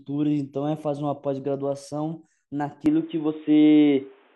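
At 2.86 s the speech turns dull and boxy without any gap and stays that way to the end of the clip. Nothing above about 3.8 kHz survives, so sibilants lose their crispness and upper harmonics vanish. The level shifts by roughly 5 dB, and a new background noise floor appears at about 35 dB below the speech. The likely cause is an input switched to a poorer device, such as a different microphone or a headset's narrowband call profile, taking over mid-recording.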